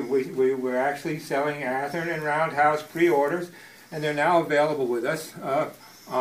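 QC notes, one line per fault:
No faults heard.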